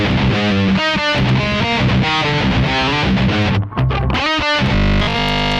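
From 4.75 s to 5.59 s, new audio likely stopped reaching the output in time, so the playback path kept refilling the gap by looping the last short buffer of about 20 ms while the real incoming audio was dropped. Essentially the whole stretch is made of these repeats, and looping them at that length imposes a fixed 50 Hz buzz on the sound. This robotic sound from repeated short buffers is a rigid, metallic buzz that only loosely follows the original.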